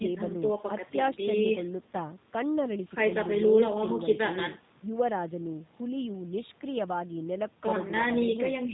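From start to finish, the speech carries plainly audible G.729 codec damage. The sound is rebuilt from a vocal tract model, a pitch predictor and sparse pulses in each short frame. Nothing above 4 kHz survives. It sounds rough and slightly synthetic, which fits an 8 kbit/s stream.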